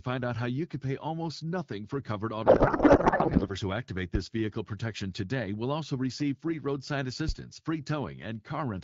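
From 2.45 to 3.48 s the speech gives way to garbled noise and warble that barely tracks what was being said. This is a codec payload misread. The receiver is unpacking the AMR bits in the wrong layout, which points to octet-aligned frames being parsed as bandwidth-efficient ones. Each frame still decodes as valid, but with its fields shifted, so the decoder synthesizes nonsense until the packing matches again. Outside this stretch the AMR wideband codec at 12.65 kbit/s leaves only light coding damage.

At 7.29 to 7.35 s a deep, abrupt thump sounds and dies away in about 13 ms. This is a phantom power thump. Supply voltage was switched on or off on the live input, and the sudden step passed through the coupling capacitors into the signal as a single low-frequency pulse.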